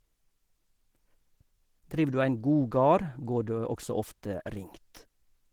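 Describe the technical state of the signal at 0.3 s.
Opus compression is audible at 0.3 s, as across the whole clip. The speech sounds hoarse, grainy and muffled, likely from Opus in its hybrid speech mode at a low bitrate around 16 kbps, which rebuilds thin bands with noise.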